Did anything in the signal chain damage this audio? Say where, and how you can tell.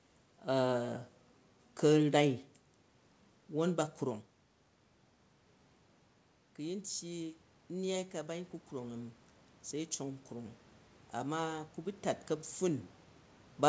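Yes. From 6.57 s to 10.61 s the speech and the room noise behind it swell together, climbing about 7 dB over those four seconds. That is automatic gain rising in the call processing stage. The level at the input had fallen by about 13 dB, so the gain control slowly pushed its gain up to compensate. The tell is that the background lifts along with the voice rather than staying put.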